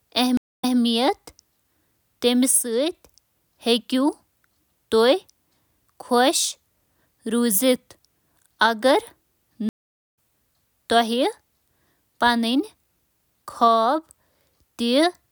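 A speech recording interrupted twice by a stream reconnect: at 0.37 to 0.79 s, 245 ms of silence before the audio resumes 168 ms earlier, repeating material, and at 9.69 to 10.14 s, 446 ms of silence before it jumps roughly 0.4 s ahead. Unlike a plain dropout, the timeline itself shifts when a fresh decoder restarts.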